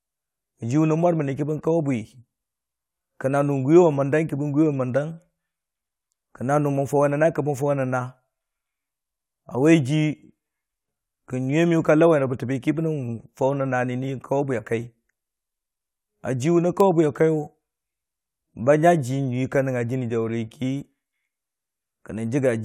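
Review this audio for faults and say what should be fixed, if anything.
Nothing stood out on listening to the speech, so there is nothing to fix.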